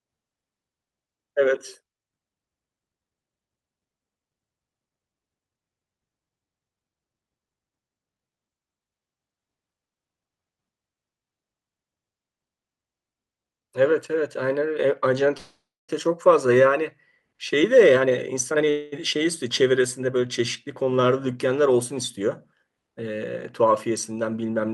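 At 15.37 s there's a call audio freeze lasting about half a second. The last sound stretches into a fading buzz, then about 270 ms of silence, and the speech picks up where it stopped, likely because delayed packets drained the jitter buffer. From 17.54 to 18.63 s a jitter buffer speed-up trims roughly 0.4 s, so the speech runs hurried at 134% with pitch intact. Then at 18.70 s a shorter 224 ms freeze fills in without going silent.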